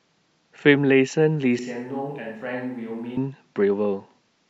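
Switch to a distant microphone, 1.59 to 3.17 s: speech suddenly turns roomy, thin and about 10 dB quieter, likely because the close microphone dropped out.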